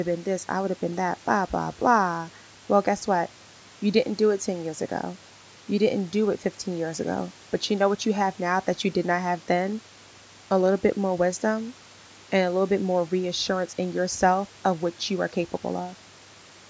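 Nothing is technically wrong with this speech recording, which has been through a call's microphone processing.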